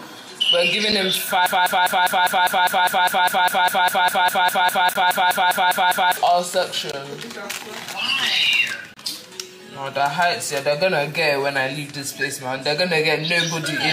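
At 0.92 s a gap between stream segments cuts a hole of about 7 ms of silence into the sound. The time stamps of two consecutive segments leave a small gap, and the player fills it with digital silence. Nothing is lost, but the hard edges produce a brief tick-like dropout. The same fault recurs at 4.94 to 4.96 s (18.5 ms), 6.92 s (18 ms) and 8.94 to 8.97 s (27 ms). Their spacing of roughly 2 s fits 2-second segment boundaries.

From 1.46 to 6.17 s there is a broken-record loop. A 201.6 ms fragment repeats exactly, back to back, 23 times, and sounds like a stuttering, mechanical cycle that stops the sound from moving forward. The cause is likely a stall in the player, encoder or stream that kept re-sending the last fragment it held. The audio that should have played during those 4.7 seconds is lost, and the 4.94 s gap falls inside the loop.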